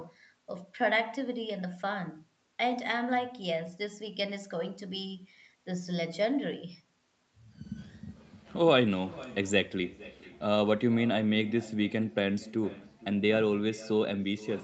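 From start to finish, every phrase returns about half a second later as a faint copy, roughly 19 dB below the direct speech. That is echo with no canceller: the far end played the call over a loudspeaker, its microphone caught it, and nothing removed it before it travelled back. Unlike room reverberation, which smears continuously, this repeat arrives as a distinct, delayed duplicate, thinner, and like the direct sound it carries nothing above 8 kHz.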